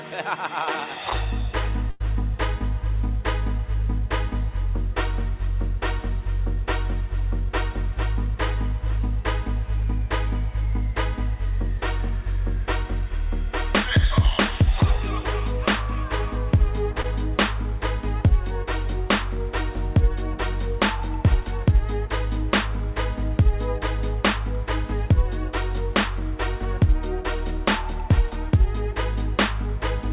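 At 1.9 to 2.02 s the audio is held and dies away over a gap of about 98 ms before resuming further on, with about 100 ms missing. This is a burst of packet loss: the receiver extended the last sound and turned it down. Around 17.02 to 17.06 s there is a brief smear where about 20 ms never arrived in time. This short concealed packet loss was filled with roughly 19 ms continued from the preceding sound, then blended back into the real signal. The audio passed through a G.711 mu-law call path at 64 kbps, and nothing above 4 kHz can be heard.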